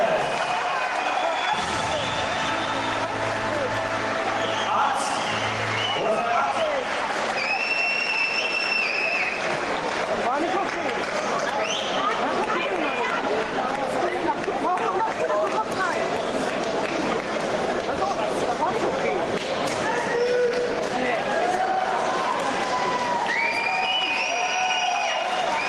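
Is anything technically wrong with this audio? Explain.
No, nothing here sounds technically wrong to me; there's nothing that jumps out as a problem.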